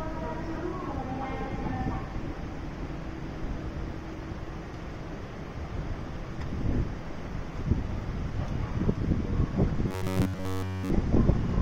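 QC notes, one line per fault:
9.88 to 10.90 s, robotic sound from repeated short buffers: for about a second the sound turns into a rigid, metallic buzz pitched at roughly 94 Hz. A buzz at that pitch means one slice of roughly 11 ms is being looped over and over, and in this stretch essentially all of it is repeats while the real audio gets skipped. The likely cause is new audio arriving too seldom, with the player filling the gaps by replaying its last short buffer.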